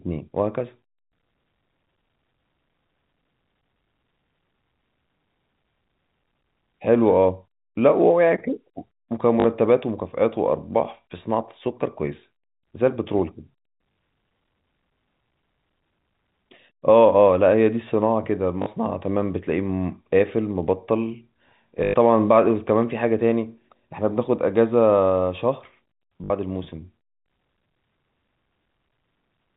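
Packet loss with last packet repeated at 9.40, 13.92, 18.62, 21.84 (100 ms) and 26.24 s (60 ms; others 40 ms): the previous packet loops, producing buzzy robotic stutters.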